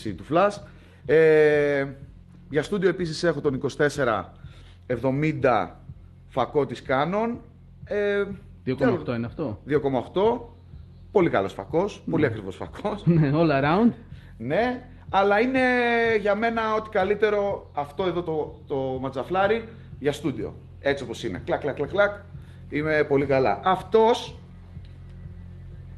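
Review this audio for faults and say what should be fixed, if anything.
Nothing here needs fixing; no faults were found.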